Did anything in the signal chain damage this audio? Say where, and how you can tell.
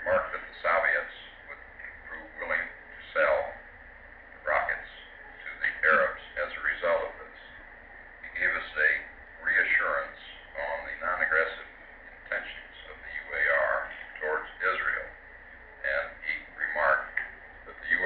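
No, nothing in the signal chain has left an audible mark on this audio. There is no point in the sound where a stage of the chain can be heard damaging it.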